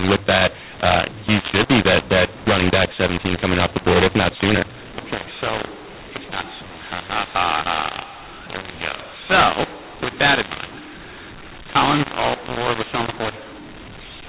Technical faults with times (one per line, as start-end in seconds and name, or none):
0.00-14.29 mu-law and A-law mixed up